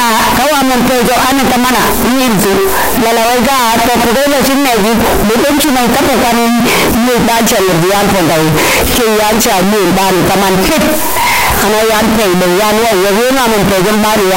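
From start to finish the speech is harsh, near-square and loud at an almost fixed, high level, with noise matching speech level: float read as integer, likely 32-bit float samples decoded as integers. Waveform looks clipped-flat; spectrogram shows dense broadband energy.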